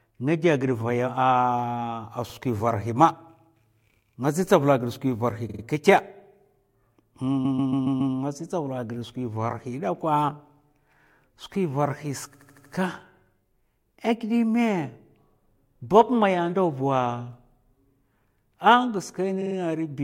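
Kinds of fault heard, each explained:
Repeated frames: a chunk of the compressed stream got played more than once, so the decoder loops the same slice of speech and you hear a stutter. Here it happens five times, at 2.29, 5.49, 7.44, 12.34 (right after "skwi varhi") and 19.41 s. The looped blocks run from about 42 to 139 ms, replayed one to five extra times, each adding between roughly 50 ms and 0.7 s to the clip.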